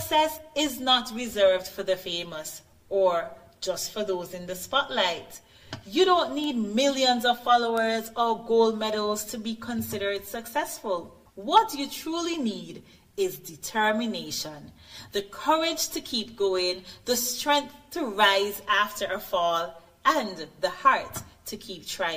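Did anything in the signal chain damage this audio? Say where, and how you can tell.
Yes. Three bit error spikes show a digital-domain fault, most plausibly in storage or on a digital link, where single flipped bits corrupted individual samples. Each sample value jumps by a power of two and returns immediately, so the sound carries three isolated, broadband ticks unrelated to the material: at 6.44 s (about -16 dBFS), 7.78 s (about -10 dBFS) and 10.17 s (about -22 dBFS). Each tick lasts one sample.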